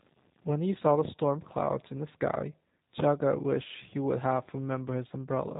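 Throughout, the speech has passed through the G.729 codec, its sound pointing to the 8 kbit/s G.729A variant, which resynthesises it from a vocal tract model, pitch prediction and sparse pulses. Nothing above about 3.8 kHz survives, leaving it muffled, plainly rough and slightly synthetic.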